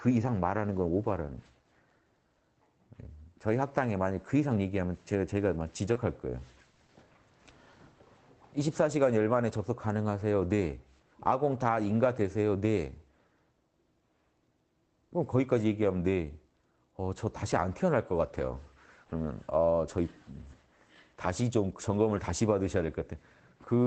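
Short concealed packet loss at 5.93 to 5.97 s: about 20 ms never arrived in time, so the receiver extended the preceding sound and blended back, leaving a brief smear.

A lost packet rebuilt from error correction at 5.95 to 5.97 s: the following packet carried a low-rate copy, so the 20 ms plays without a gap but sounds rougher and noisier.

A burst of packet loss at 6.71 to 6.79 s: about 60 ms went missing together, so the last sound is held and fades as a buzz or hiss before the audio resumes further on.

Short concealed packet loss recurs at 6.87 to 6.91 s and 7.13 to 7.17 s, each a 20 ms patch continued from the prior sound, heard as a quick wobble. Throughout, the Opus call path caps the bandwidth at 8 kHz, which fits a low-rate stream around 20 kbps.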